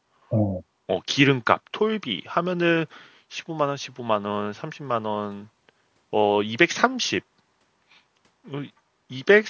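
Speech through call microphone processing, with no technical faults heard.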